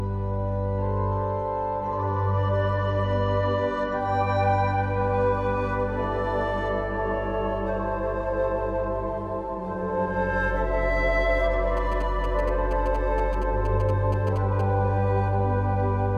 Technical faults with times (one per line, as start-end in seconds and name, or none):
0.00-4.00 adaptive stream starting at a low bitrate
11.77-14.61 GSM signalling bursts